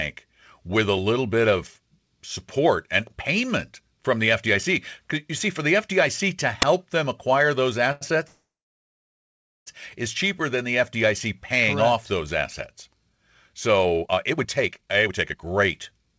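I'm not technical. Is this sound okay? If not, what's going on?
No, there are four problems.

Uninitialised buffer, at 6.62 s: a sharp, very loud burst of digital noise lasting a hundredth of a second. The playback system sent out a slice of memory before any real sound had been put into it, so leftover junk played as noise.

Short stall from a late packet, from 7.92 to 8.03 s: one sound is held on for about a tenth of a second too long. A piece of the call audio arrived late, so the receiver stretched the last bit of sound to fill the wait, then carried on from where it was.

Call audio freeze, from 8.27 to 9.68 s: the sound stops for about 1.4 s, most of that in silence, then resumes where it left off. Nothing is lost, but a gap is inserted. The likely cause is call data held up in transit, so the receiver ran out of sound to play.

Jitter buffer speed-up, from 13.85 to 15.51 s: the speech suddenly sounds hurried, running at about 1.6 times normal speed with no change in pitch. 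The receiver had built up too much waiting audio and trimmed many tiny slices, about a second in total, to catch up.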